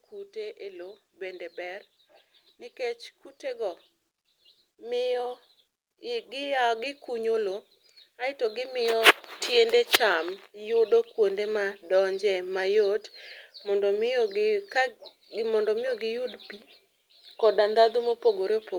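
From 0.09 s to 11.84 s, an automatic gain rising fault shows itself: the gain control judged the incoming level too low and kept turning its gain up, by about 14 dB in total over those twelve seconds. Because the boost applies to everything picked up, the speech and the background noise swell together, growing steadily louder until the level settles just before "donje mayot".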